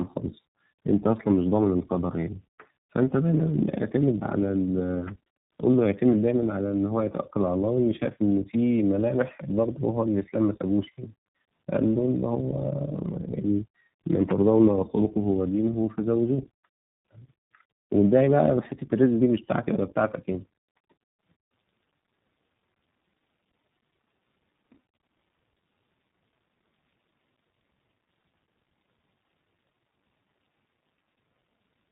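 Throughout, speech sounds rough, muffled and warbly, empty above 3.8 kHz: tandem speech coding, with a second speech codec re-coding the first's damaged output.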